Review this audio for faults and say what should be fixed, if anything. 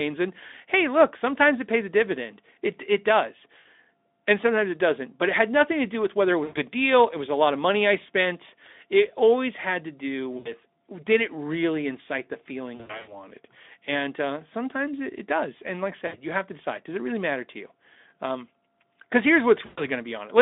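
VoIP packet loss concealed by the speech codec at 3.59–3.66 s, 6.43–6.62 s after "do with whether it", 10.37–10.52 s, 12.75–13.18 s after "it really incite the", 16.07–16.16 s between "like I" and "you have to decide", and 19.65–19.87 s. During each gap the Speex decoder extends the last pitch and filter into a fading, buzzy or noisy smear, and the voice stays weak briefly after it. Prevent it by adding jitter buffering and forward error correction, or by fixing network loss on the call path.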